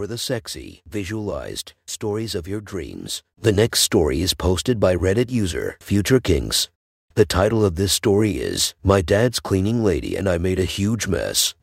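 Throughout the speech, a block size mismatch (truncated) discards each block's tail, producing a steady 46.9 Hz buzz that fits 1024-sample blocks, with speed unchanged.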